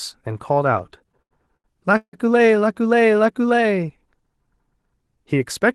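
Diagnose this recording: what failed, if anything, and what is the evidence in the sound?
Repeated stalls (stutter), 0.73 to 2.15 s: late packets drained the jitter buffer fifteen times, up to 160 ms; the spectrogram shows smeared, horizontally stretched bands where sound was continued.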